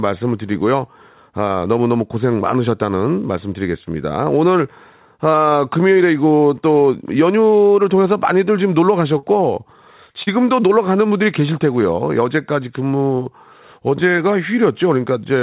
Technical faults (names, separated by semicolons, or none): burst of packet loss; short concealed packet loss